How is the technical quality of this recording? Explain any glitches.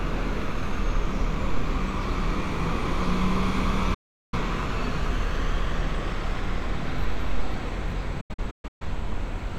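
The recording has two digital broadcast dropouts. At 3.94 s the sound fades to silence in about 8 ms and stays silent until 4.38 s. From 8.21 s to 8.85 s it breaks into several short holes, the longest 128 ms, adding up to 384 ms of silence. The receiver lost the signal or rejected corrupted frames, and muted until clean data returned. Each gap fits about nine discarded frames, and whatever was broadcast during them is gone.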